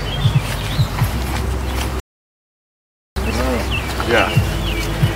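At 2.00 s a rebuffering stall begins: the player's downloaded audio runs out, leaving silence until 3.16 s, then playback resumes exactly where it stopped, adding about 1.16 s.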